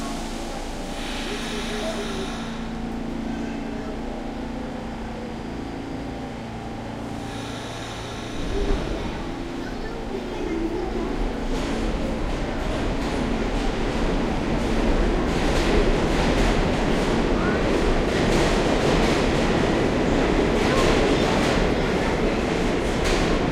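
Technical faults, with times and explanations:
No technical faults heard anywhere in the audio; nothing to log.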